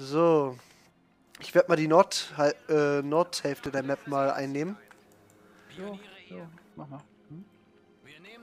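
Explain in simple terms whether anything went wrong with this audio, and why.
A brief electrical jolt, likely from a plug, a switch or a burst of static, got into the signal path between 3.66 and 3.80 seconds. That sudden spike is added straight on top of the recording, so you hear a loud pop, in fact two sharp pops in quick succession, standing out noticeably above the surrounding audio. The underlying sound carries on beneath them without stopping, which is typical of this kind of fault.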